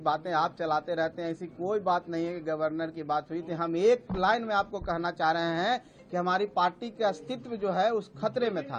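Nothing is technically wrong with this audio clip.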